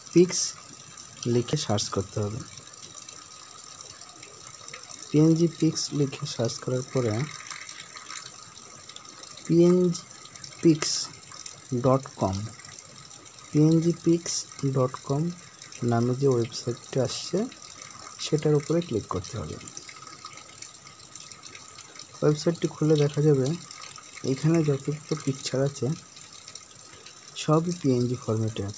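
No technical faults occur anywhere in the audio, so there is nothing to describe in time order.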